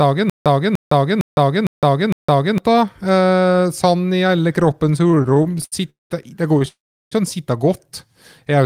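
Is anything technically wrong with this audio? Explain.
Yes, the speech is interrupted by three kinds of playback fault.

Stutter with silent gaps runs from the very start to 2.58 s. A fragment of about 0.30 s plays, then about 0.16 s of dead silence, repeating every 0.46 s, five times. The player likely stalled and replayed its last fragment at each retry, so the speech for that stretch is lost.

Repeated stalls (stutter) occur from 5.03 to 5.74 s and from 6.54 to 6.68 s. The speech drags and judders as sound is stretched over 17 short gaps (longest 75 ms) in the first span, nearly 40% of it filled, and 4 gaps (longest 14 ms) in the second. Late packets kept emptying the jitter buffer and the receiver bridged each gap, so nothing is missing.

Call audio freeze occurs at 5.90 to 6.12 s and 6.68 to 7.13 s. The sound hangs as a fading continuation before going silent for about 0.17 s and 0.36 s respectively. 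Delayed packets likely drained the buffer, inserting roughly 0.21 s and 0.44 s of delay, and the speech resumes where it stopped with nothing lost.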